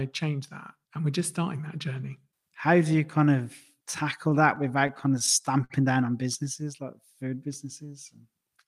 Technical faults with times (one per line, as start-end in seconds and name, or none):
3.91-5.73 repeated stalls (stutter)
6.22-6.65 jitter buffer slow-down